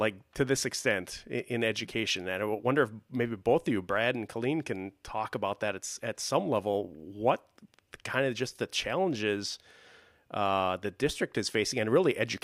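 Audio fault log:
Nothing to flag here; I listened to the whole speech clip and heard no faults at all.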